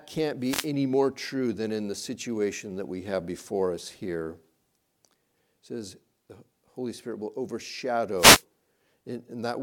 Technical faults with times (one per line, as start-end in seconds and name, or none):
0.40-0.72 wireless microphone noise hit
8.15-8.43 wireless microphone noise hit